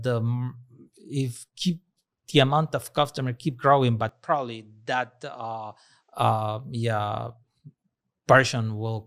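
After "of customer keep growing", at 4.09 s, the speech turns duller and about 5 dB quieter. Nothing passes above 8.9 kHz. A faint new hiss sits far below the speech. There is no gap. The likely cause is an input switched to a poorer device. Full tone returns at 6.13 s, before "uh yeah".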